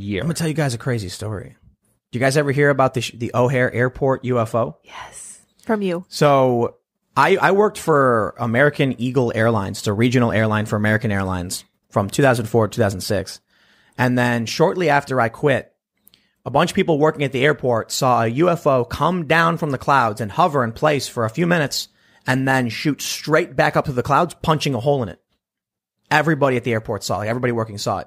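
Nothing in this speech recording jumps out as a technical problem, so there's really nothing to flag here.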